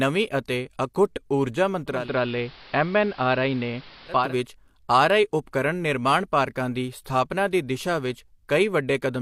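Right after "ਅਤੇ ਅਖੁੱਟ ਊਰਜਾ", at 1.86 s, the speech dulls and a hiss rises, sitting roughly 25 dB below the signal, with a level shift of about 1 dB, until 4.36 s. This is digital radio blending to analogue: the receiver lost its digital stream and cross-faded over 305 ms to the station's AM broadcast, whose narrow bandwidth removes the treble, and then faded back.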